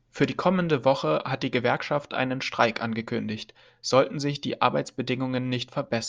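No technical faults can be heard anywhere in the recording, and the speech signal stays continuous and stable throughout.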